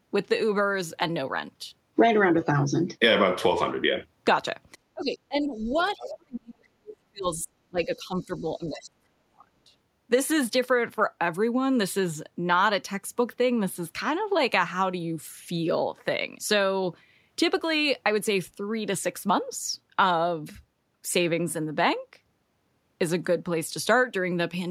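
From 4.94 to 5.78 s the speech dips by as much as about 25 dB, for roughly half a second in total. This is speech suppressed in double talk: with both ends talking at once, the echo canceller likely could not tell the near talker from the loudspeaker echo and attenuated everything. Between 5.58 and 6.16 s the other side's voice leaks through at about 15 dB below the speech, likely a residual echo the canceller failed to remove. Suppression returns from 5.96 to 7.51 s, now deeper at around 40 dB, and again from 7.70 to 9.73 s at around 35 dB. Each stretch affects about one and a half seconds of speech in total. Inside that last stretch, two brief scraps of the far-end voice slip through: a very faint one from 8.35 to 8.42 s, roughly 40 dB down, and a clearer one from 8.69 to 8.83 s, roughly 25 dB down.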